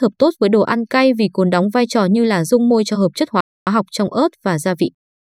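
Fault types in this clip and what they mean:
Playback stall: the speech cuts to silence for about 0.26 s after "cho hợp chất hóa", likely the player starving for data, then resumes with "học trong ớt".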